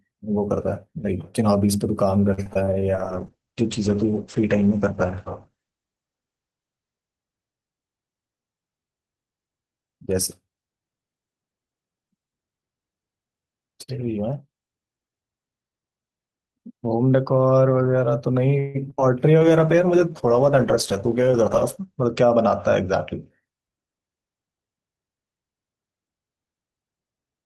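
From 2.33 to 2.68 s the speech breaks into repeated packet loss: five short holes, the longest 41 ms, are patched by stretching the previous sound, so about a third of the span turns choppy and robotic. Unlike a plain dropout, the gaps are filled with continuation of the last sound rather than silence.

From 2.95 to 8.06 s a call bitrate drop sets in. The encoder is starved of bits, which points to a fall from about 40 kbps to roughly 10 kbps. The top end is cut from 20 kHz to 8 kHz for about 3.5 s, and the speech sounds muffled and watery. It is a steady dulling, not a series of breaks.

Between 18.59 and 19.00 s packet loss returns, with four gaps and one long 151 ms hole. About 41% of the span is concealed, and it sounds choppy with pieces missing.

A second bitrate drop runs from 19.41 to 23.37 s, which fits a fall to roughly 12 kbps, with the same 8 kHz ceiling.

Inside it, from 20.92 to 22.67 s, a jitter buffer speed-up trims short pitch-period pieces, about a tenth of a second in total. 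The speech runs about 5% faster at unchanged pitch and sounds hurried. Unlike a resampling error, the pitch does not rise.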